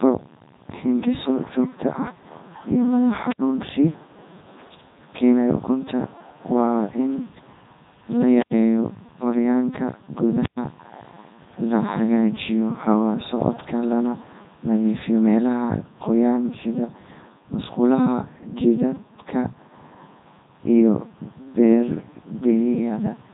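From start to finish the speech has gone through the Codec 2 vocoder, and the damage is heavy. Instead of keeping the waveform, this codec only passes along pitch, voicing, energy and a rough spectral envelope, then rebuilds the voice from sine waves, so everything comes out robotic and buzzy. The sound fits its top 3.2 kbit/s mode, and there's nothing above about 3.8 kHz, which leaves it dull and boxed-in on top of the synthetic texture.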